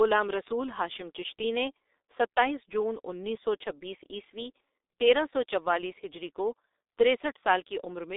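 From start to finish the speech carries G.723.1 codec damage, and it is heavy. Nothing reaches above about 3.8 kHz, and the usable band sits roughly between 300 Hz and 3.7 kHz, so the sound is thin and muffled. The coarse, hoarse texture and smeared consonants fit a 6.3 kbit/s stream with 30 ms frames, where the slowly updated voice model cannot follow rapid changes in the speech.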